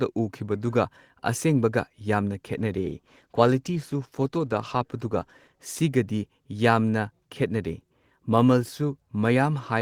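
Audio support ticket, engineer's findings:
Call bitrate drop, 2.57 to 5.71 s. Speech turns rough and dull, with highs trimmed. Component: sender's Opus encoder. Bandwidth estimate fell, so the encoder coarsened its coding and cut the high band. The sound points to a halving, about 32 to 16 kbps, held for roughly 3 s before recovery.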